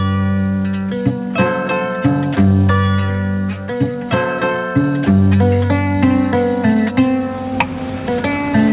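Nothing stood out on listening, and the top end stopping near 4 kHz fits an ordinary telephone-band call codec.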